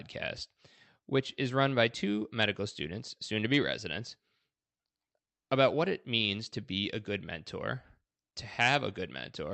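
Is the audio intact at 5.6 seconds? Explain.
Yes, the audio is intact at 5.6 seconds, with the speech passing through the call path there without any break, dropout or other fault.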